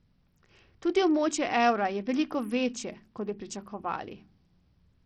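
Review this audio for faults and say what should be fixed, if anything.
Bluetooth SBC compression, heard throughout the speech from start to finish: the top end drops in and out and a gritty, grainy noise rides on the sound, with some aliasing in the highs. This is likely SBC coding at a very low rate, which fits roughly 64 kbps. With so little bit pool, the weak upper sub-bands get few or no bits and the rest are quantised coarsely, so treble flickers and grit builds up. To prevent it, record over a wired connection or force a higher-bitpool or better Bluetooth codec.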